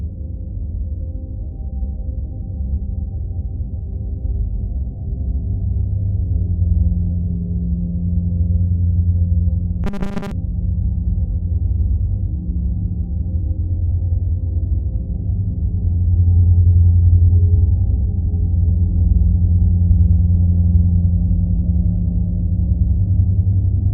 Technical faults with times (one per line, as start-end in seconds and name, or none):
9.84-10.31 robotic sound from repeated short buffers